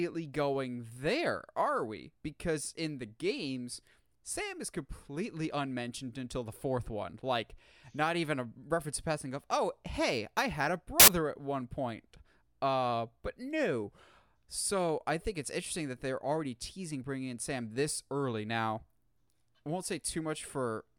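At 11.00 s, just after "hey I had a", the speech is replaced for about 80 ms by a harsh burst of loud broadband noise that ends at 11.08 s, before "at one point". This is samples built from the wrong bytes: over that stretch the reader assembled each sample from misaligned or swapped bytes, so the rapidly fluctuating low-order bits landed in the most significant position and turned the waveform into broadband hiss.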